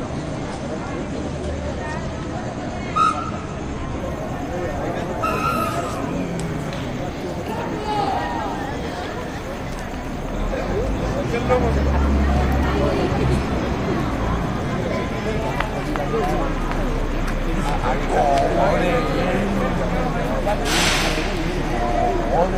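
For the first 4.0 seconds you get an adaptive stream starting at a low bitrate. The treble stops dead around 9.8 kHz and codec smearing is stronger, which fits roughly a 32 kbit/s AAC rendition. At 4.0 s the player steps up, and the top end opens out instantly with no gap.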